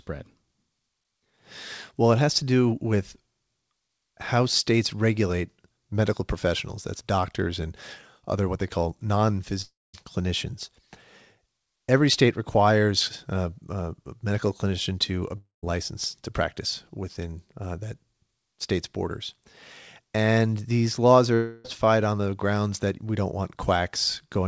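At 9.62–9.95 s, 15.37–15.64 s and 21.34–21.66 s the sound smears into a fading buzz, then near-silence in the first two, likely a long network dropout; the waveform collapses and the spectrogram shows blurred tails below the 8 kHz codec ceiling.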